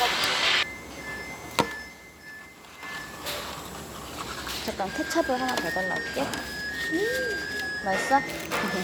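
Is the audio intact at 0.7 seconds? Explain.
Yes, at 0.7 seconds the audio plays through cleanly, with no dropout, click, distortion or other fault at that moment.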